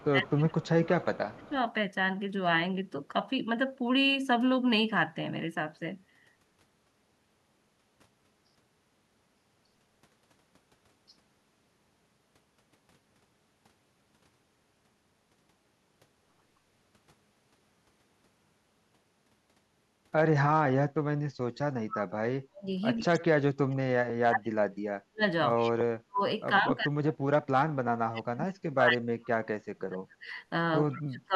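Speech with two faults. Speech suppressed in double talk appears at 0.0–1.53 s, 21.56–25.24 s, 25.61–30.3 s and from 30.93 s to the end. The level drops by up to about 20, 40, 40 and 25 dB, which is likely an echo canceller ducking the talker while the far side speaks. These spans show as sudden hollows in the waveform envelope and as faded or missing bands on a spectrogram. Echo leak comes in at 22.97–23.16 s, 25.6–25.7 s, 30.27–30.31 s and 30.89–30.96 s as short copies delayed by 133 ms, about 15 to 40 dB below the speech. These faint scraps are likely loudspeaker echo that the far end's canceller failed to remove, and they show as weak repeated traces trailing the original patterns.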